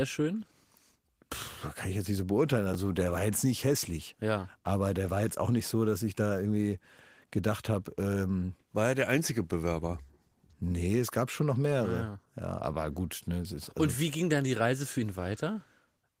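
At 2.73 s, between "jetzt nicht so beurteilen" and "der war jetzt nicht", a 10 ms chunk arrived one chunk late and plays after its successor: chunks out of order. Nothing is lost, but the reversed span to 2.75 s has hard joins, heard as a brief jumbled flicker.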